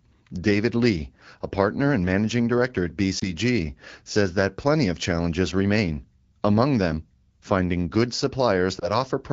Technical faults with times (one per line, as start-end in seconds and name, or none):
3.19-3.28 lost AMR speech frames
8.79-8.91 lost AMR speech frames